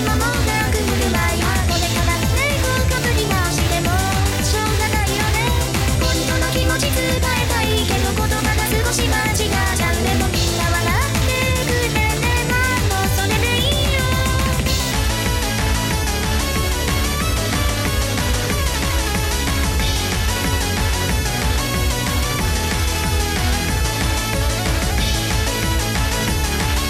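From 14.92 s to the end, there's a section at the wrong speed: the audio drops to about 0.83 times normal, so everything drags and sits roughly three semitones lower. It's likely playback or an edit running against the wrong clock.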